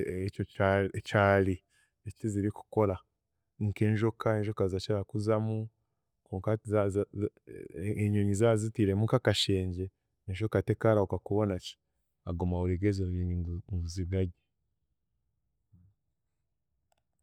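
A speech recording with nothing technically wrong in it.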